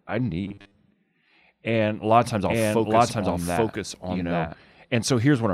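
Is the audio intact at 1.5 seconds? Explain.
Yes, at 1.5 seconds the speech plays through intact, with no dropout, click, distortion or other fault at that point.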